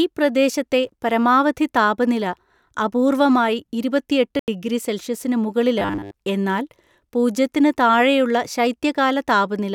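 At 0.88 s and 3.38 s, just before "ഇരുപത്തെട്ടു ഡിഗ്രി സെൽഷ്യസിനു", a corrupt FLAC frame briefly corrupts the sound. Damaged bits derail the decoder's prediction from that point on, at worst until the frame ends.

At 4.39 s, a corrupt frame is muted. The decoder rejects it, leaving an abrupt 86 ms hole of silence.

From 5.79 to 6.14 s, after "ഇരുപത്തെട്ടു ഡിഗ്രി സെൽഷ്യസിനു" and before "എന്നാൽ പൂജ്യത്തിന്", the speech becomes a rigid metallic buzz at 100 Hz. This robotic sound likely comes from repeated short buffers. The buzz fits about 10 ms being looped while most of the real audio is skipped.

At 7.93 s, just after "എന്നാൽ പൂജ്യത്തിന്", another corrupt FLAC frame briefly corrupts the sound.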